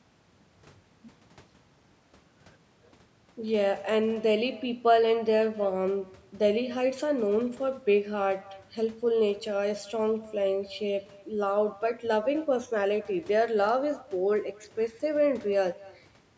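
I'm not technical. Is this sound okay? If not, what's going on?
No. Throughout the speech, each phrase is followed about a fifth of a second later by a faint, thin copy. This is echo with no canceller: a loudspeaker's sound leaks back into the microphone.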